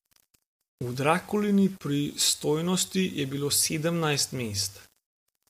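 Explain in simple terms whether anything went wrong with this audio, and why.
A gritty, sandy roughness clings to the speech from start to finish, strongest on quieter syllables and trailing sounds. This is low bit depth without dither: the sound was likely stored with too few volume steps, which fits about 7 bits, and rounded without added noise, so the error follows the voice.

Across the whole clip the voice also sounds rough and grainy, with a hiss-like fuzz between its tones and nothing above about 15.8 kHz. That points to low-delay AAC compression, likely AAC-ELD as used in video calls, whose very short chunks capture voice pitch poorly when data is tight.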